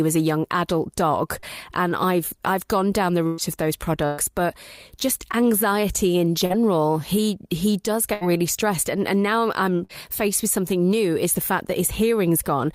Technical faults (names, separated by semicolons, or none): short concealed packet loss; burst of packet loss